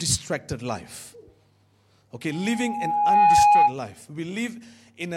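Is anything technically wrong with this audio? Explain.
Yes. From 2.31 to 3.75 s there's loudspeaker feedback squeal: the mic catches its own speaker, and an 827 Hz tone swells over about a second to roughly 15 dB above the sound.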